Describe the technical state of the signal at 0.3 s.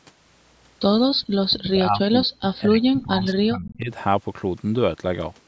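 At 0.3 s the speech signal is intact, with nothing wrong at that moment beyond the ordinary call microphone processing, which trims the lowest bass and leaves nothing above 8 kHz.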